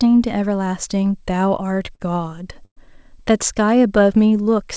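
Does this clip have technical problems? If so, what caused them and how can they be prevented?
Yes. Between 1.42 and 2.79 s there are repeated stalls (stutter): twelve brief hitches, the longest about 113 ms, totalling about 238 ms. Packets arrived late or more slowly than playback consumed them, so the jitter buffer kept running dry, and the receiver stretched the last sound, fading it in the longer waits, until audio resumed. Nothing is lost, but the speech drags. On a spectrogram, the gaps show as smeared, repeated spectral slices. On a waveform, they show as stretched, looping segments, against a G.722 band that ends at 8 kHz. A steadier network path or a larger adaptive jitter buffer would prevent it.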